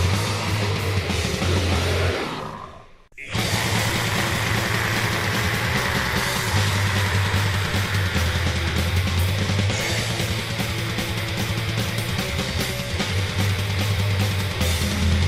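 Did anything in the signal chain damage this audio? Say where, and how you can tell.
No, nothing in the chain audibly damaged this audio.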